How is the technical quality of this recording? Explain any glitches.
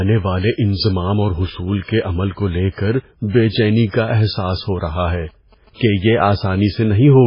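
The recording has heavy codec damage throughout and two further kinds of fault.

Throughout, the speech sounds watery, with nothing above 5.3 kHz. This is likely MP3 compression at a very low bitrate, around 16 kbps, zeroing weak frequency lines and cutting the treble.

Pre-echo appears at 1.84–1.88 s, after "والے انضمام اور حصول", and at 2.74–2.78 s, after "کے عمل کو لے". Block-spread quantisation noise leaks ahead of each attack as a hiss of 48 ms and 38 ms respectively.

GSM signalling bursts run from 4.73 to 6.01 s, well below the speech. A nearby 2G phone's radio bursts are rectified by the audio circuit, producing a galloping dit-dit-dit of 217 Hz buzzes.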